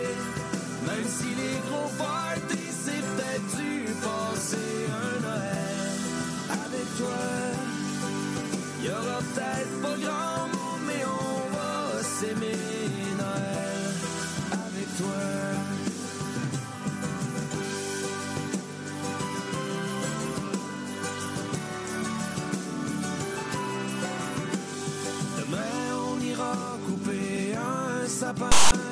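The audio has one fault near its end: file tags played as audio. From 28.52 to 28.72 s, a block of metadata is read as if it were samples. The text bytes come out as a loud, harsh rasp pushed to one side. The zero padding after them plays as dead silence. The burst starts and stops with hard edges. It lasts about 0.2 s. The tag data was likely decoded as part of the audio stream.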